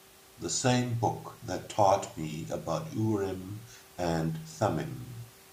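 No technical faults are audible.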